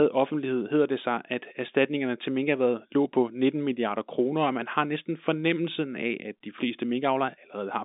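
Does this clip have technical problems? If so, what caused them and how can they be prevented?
No, there's nothing wrong here; it's simply speech carried over G.711 A-law telephone coding, so everything sits inside the usual phone band with nothing above about 3.8 kHz, and that's just how a phone line sounds.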